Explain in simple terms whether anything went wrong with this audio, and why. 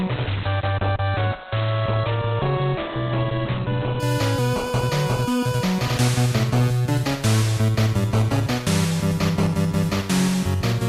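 The first 4.0 seconds sound dull and muffled, then abruptly clear: an adaptive stream starting at a low bitrate, upgrading once it had measured the connection.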